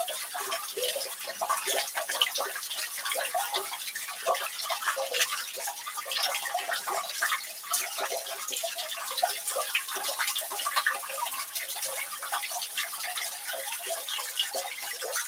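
From start to finish, a speech-tuned noise suppressor is treating these sounds as noise, so sustained parts and tails keep dipping by around 5 dB and the audio pumps.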